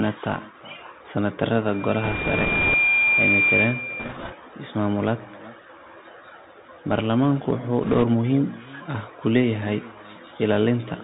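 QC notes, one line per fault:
throughout: echo with no canceller. Every phrase returns about 15 dB quieter and thinner, roughly 400 ms later, as far-end loudspeaker pickup comes back uncancelled.
throughout: Bluetooth CVSD headset codec. Plainly audible damage: nothing above 4 kHz, scratchy sibilants, granular hiss, as the 64 kbps one-bit delta coder's adaptive step lags fast high-frequency content.
2.04–2.74 s, 4.00–4.34 s, 7.83–8.03 s: bit errors on a Bluetooth voice link. Rushing crackle over the speech, heaviest in the first run; flipped bits, around 4 to 5 percent, each cause an error that grows with speech level but dies away fast, so no sharp clicks.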